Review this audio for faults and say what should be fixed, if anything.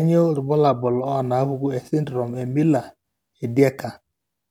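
No faults; nothing needs fixing.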